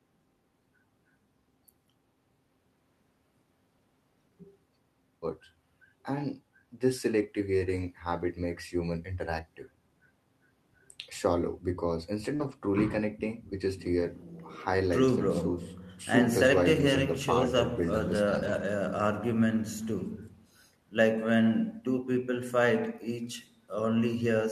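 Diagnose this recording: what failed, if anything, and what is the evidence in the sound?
Short concealed packet loss at 12.35 to 12.42 s, a network fault. About 40 ms never arrived, so the receiver extended the last sound to cover the gap, leaving a brief smear.

Lost packets rebuilt from error correction, also network, at 12.40 to 12.54, 13.98 to 14.04, 16.76 to 16.82 and 18.36 to 18.62 s. The decoder played low-bitrate backup copies, so there are no gaps, just rougher, noisier stretches.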